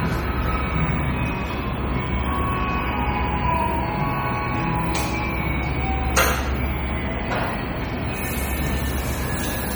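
Right from the start and all the way through, the audio has a watery, swirly quality with the top end shaved off, and that's most likely MP3 compression. The encoder is clearly starved of bits, consistent with something around 48 kbps, so it chops the treble at a fixed point and lets weak frequency lines blink on and off between frames. That flickering gives the warbly texture, and sharp attacks come out smeared rather than crisp.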